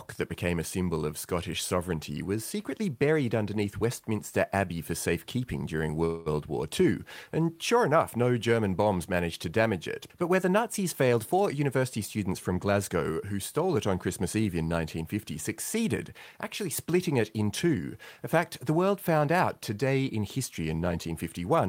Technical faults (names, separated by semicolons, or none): call audio freeze; jitter buffer speed-up